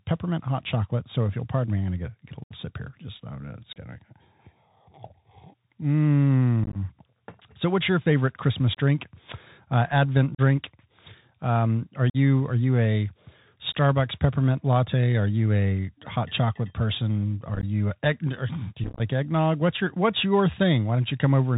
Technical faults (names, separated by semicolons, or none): Bluetooth CVSD headset codec; unconcealed Bluetooth headset packet loss